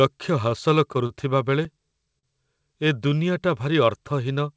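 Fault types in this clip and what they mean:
Repeated stalls (stutter): Between 0.50 and 1.13 s the jitter buffer ran dry four times, and the receiver held the last sound for about 58 ms in total (longest 34 ms). Nothing is lost, but the speech drags. A spectrogram shows smeared, frozen bands; the waveform shows repeated cycles.
Short stall from a late packet: At 2.19 to 2.26 s one packet arrived late, so the last sound was stretched for 44 ms before playback resumed where it left off, delayed by 44 ms. The waveform shows a held, slightly dipping stretch, and the spectrogram a brief horizontal smear.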